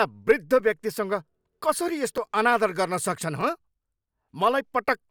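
Three repeated buffers are heard, at 0.60 s, at 2.18 s just before "अनादर गर्न", and at 3.41 s. New audio arrived late, so the last 5.3 ms block played again. That fits a 256-sample buffer. The first two repeat once, the third twice. Each sounds like a click or brief buzz.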